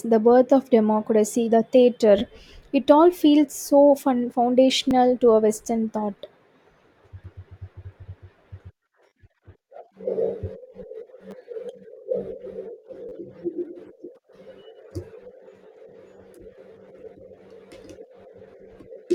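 Short repeated-buffer stutters occur at 2.19–2.21 s, 4.91 s, 9.09–9.12 s, 11.31–11.33 s and 13.09–13.12 s. Each time, fresh audio arrived late and the same tiny slice replayed one to three extra times, butting together at hard joins into a brief buzz that fits a 10 ms buffer. Unlike a dropout, essentially nothing is lost.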